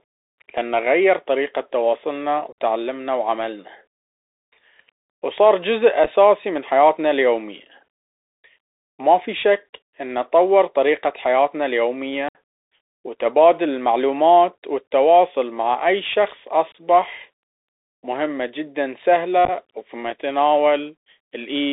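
Speech heard through a Bluetooth CVSD headset codec. On a spectrogram everything sits between about 300 Hz and 3.7 kHz, with a granular hiss floor under the speech. In the waveform, loud high-frequency peaks flatten into slopes because the one-bit delta step can't keep up, and s sounds turn scratchy, which fits a 64 kbps CVSD link. Unconcealed Bluetooth headset packet loss opens short holes at 2.52, 6.04, 12.29, 16.72 and 19.45 s. These show as flat gaps with abrupt vertical edges. At 6.04 and 19.45 s the dropouts come as scattered bursts that sound like crackle, and after each hole the speech returns briefly quieter.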